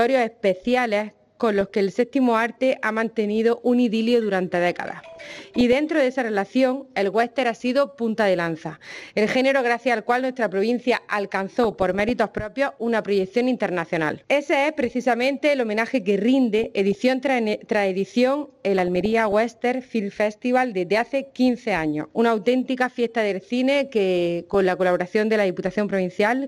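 The whole recording sounds dull and gurgly, with a granular roughness and upper frequencies that flicker in and out. This points to MP2 compression, likely at a rate of about 80 kbps, where too few bits force upper sub-bands off and leave the rest coarsely quantised. Over this come bursts of noise blips at 1.56–1.70 s, 5.05–5.73 s, 11.63–12.10 s, 16.59–16.95 s, 18.79–19.33 s and 24.51–24.55 s. This is DAB burbling: bit errors of a few tenths of a percent slip past error correction, putting short blips of noise into single sub-bands and, where wrong scale factors get through, making sub-bands jump in level for up to a frame.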